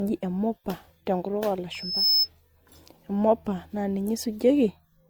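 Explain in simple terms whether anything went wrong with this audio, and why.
Two things went wrong with this speech recording.

From 1.72 s to 2.29 s there is a loudspeaker feedback squeal. A microphone was picking up the loudspeaker it was feeding, and one pitch, around 5.2 kHz, kept going round that loop and getting louder. You hear a thin, high whistle that swells up over roughly a third of a second until it is louder than the speech.

Throughout the whole clip, the sound carries the mixed flaws of more than one round of compression. This points to transcoding between lossy codecs, most likely audio saved in one compressed format and then re-compressed as MP3. Each compression step throws away detail and leaves its own small flaws. The second step also spends effort copying the first one's flaws, so both sets pile up and can be heard together.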